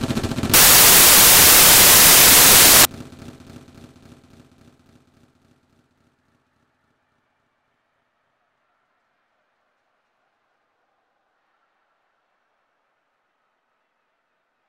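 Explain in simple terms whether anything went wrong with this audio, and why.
The playback went wrong between 0.54 and 2.85 seconds, where the samples were built from the wrong bytes. Each sample's pieces were put together wrongly, so the tiny fast-changing details became the main part. The result is a burst of loud hiss.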